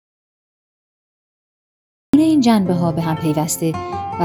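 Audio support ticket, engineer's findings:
Audio dropout to silence, 0.00 to 2.14 s, already under way when the clip opens. Silence with no room tone or noise floor, then an abrupt return mid-flow; unlike a noise gate or fade, there is no residual hiss or ramp. Likely input or link loss upstream of the encoder.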